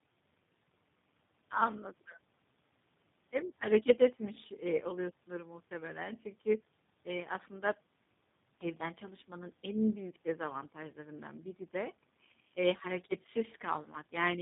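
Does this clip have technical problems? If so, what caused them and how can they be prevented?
Yes. Tandem speech coding runs throughout. Two speech codecs in a row, likely GSM full rate then G.729A, each recoded the last one's damage. Nothing remains above 3.8 kHz. Keeping one codec end to end, or passing the original coding through untouched, prevents it.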